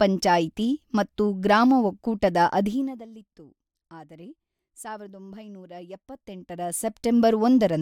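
No technical faults can be heard in this speech recording. The level rises and falls gradually in places, as if a fader were being moved, and each change stays smooth and controlled.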